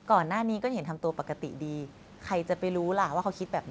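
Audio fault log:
No faults heard.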